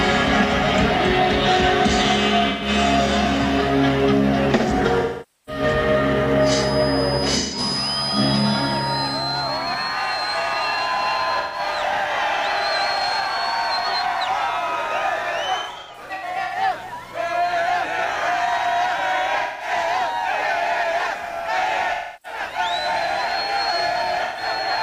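AAC frames went missing in transmission, and the decoder covered each gap by rebuilding audio from the last good spectrum. Each gap is a smeared, noisy stretch where the original detail is gone. Losses occur at 2.48 to 2.68 s, 5.00 to 5.62 s, 7.39 to 7.59 s, 11.40 to 11.59 s, 15.58 to 16.55 s, 19.42 to 19.70 s, 21.94 to 22.39 s and 24.24 to 24.44 s. Most patches last about 128 to 300 ms. The one at 5.00 s covers about 470 ms. The 15.58 s stretch is different: roughly half a second of gaps is scattered across nearly a second, with no single run much beyond 100 ms.

From 6.36 to 9.25 s a 5 kHz feedback whistle sits about 10 dB below the main signal. It is likely caused by a loudspeaker-to-microphone loop running just short of full feedback, which keeps one frequency ringing without growing into a howl. It is heard as a thin, fixed-pitch tone behind the sound, and the 7.39 s frame loss falls inside it.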